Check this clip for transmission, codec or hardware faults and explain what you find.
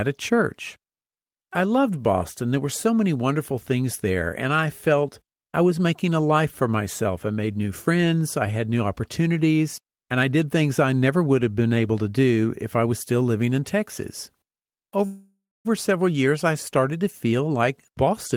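Two faults show up, both in the last few seconds of the speech.

From 15.05 to 15.67 s there's a call audio freeze. The audio stops advancing and the last bit of sound gets stretched into a fading continuation that ends in about 260 ms of silence, before picking up again at "several years I started". The likely cause is packets held up in transit, so the jitter buffer ran dry and the receiver improvised filler until they arrived. Nothing was lost; the gap just pushed everything roughly 595 ms later.

From 17.25 s to the end there's a jitter buffer speed-up, right after "years I started to". The speech runs at about 118% speed with pitch unchanged, which sounds noticeably hurried. The buffer was holding more audio than it wanted, so the receiver trimmed out many tiny pitch-period-sized slices in a row, roughly a fifth of a second in total, to claw that delay back.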